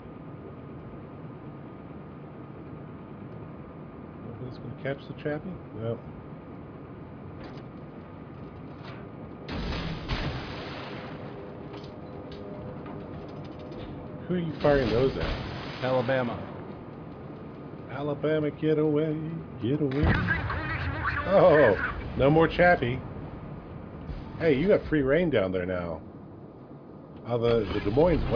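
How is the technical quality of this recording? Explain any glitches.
The technical quality of this recording is sound, with no glitches to explain.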